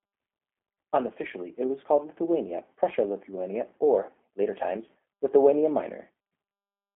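Speech with a narrow telephone bandwidth and a slightly rough, synthetic edge runs through the whole clip. Nothing reaches above 3.6 kHz, and the line band is limited to about 250 Hz to 3.4 kHz. This is G.729 codec damage: the speech is rebuilt from a coarse vocal tract filter, pitch predictor and sparse pulses, which fits an 8 kbit/s G.729A stream.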